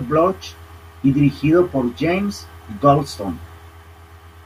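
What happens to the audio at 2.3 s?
Nothing goes wrong at 2.3 s: the speech carries on intact through that moment, with no dropout, click or distortion to be heard.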